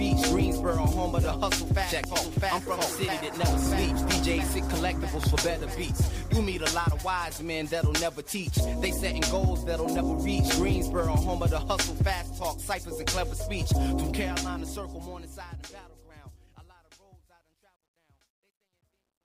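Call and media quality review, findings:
Loud pop, 2.04 s and 5.24 s: likely static or driver glitch injecting voltage pulse. Single sharp pop each, about 15 dB above signal, audio continuing underneath.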